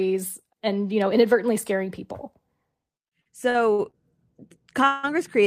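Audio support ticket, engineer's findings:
Repeated stalls (stutter), 3.07–3.95 s: five short hold-ups, longest 58 ms, about 219 ms of concealed sound, roughly a quarter of that stretch. Nothing dropped; timing drags. Component: jitter buffer. Packets arrived late or slower than playout, buffer kept emptying, and the receiver extended the last sound each time. Spectrogram: five brief smeared, horizontally stretched patches breaking normal texture; waveform shows repeated-looking short segments.

Call audio freeze, 4.87–5.05 s: one 160 ms hold, no true silence, no content lost, playback shifted later by 160 ms. Likely cause: packets held up in transit, jitter buffer ran dry, receiver continued the last sound as buzz/hiss until data resumed. Spectrogram: single flat band of frozen spectrum; waveform: uniform sustained stretch, then normal sound resumes.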